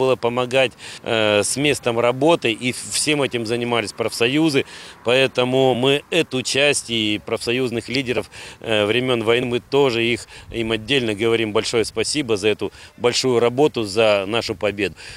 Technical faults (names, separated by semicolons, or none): compressed frames skipped